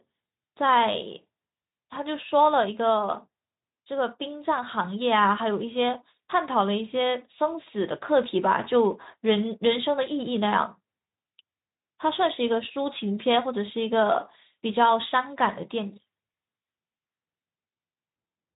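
Nothing in this speech stands out as a fault; it runs through a Speex codec at 15 kbps, so there's nothing above about 3.8 kHz, and that's simply how the link is set up.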